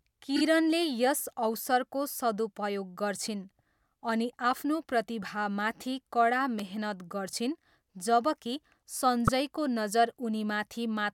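At 0.35 to 0.41 s the speech shows repeated frames: a 26.1 ms block of the compressed stream, which fits a single codec frame, was delivered three times in a row instead of once. The decoder plays that sliver again and again, so the sound catches in a quick double stutter, and the clip grows by 52.2 ms.

Right after "प्रतिभामाथि कडा", at 6.59 s, a sharp, very brief snap sits on top of the audio. This is an electrical switching spike, most likely an arc from a switch, motor or static discharge nearby, which the audio line picked up as a tight burst of energy lasting only a couple of milliseconds.

At 9.26 to 9.29 s the repeated frames fault returns in a lighter form. The same 26.1 ms frame is played one extra time, giving a single short stutter and adding 26.1 ms to the length.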